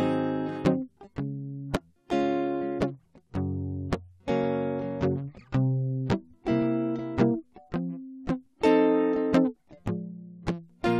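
No technical faults can be heard anywhere in this music recording. Nothing in it interrupts, distorts or drops out at any point.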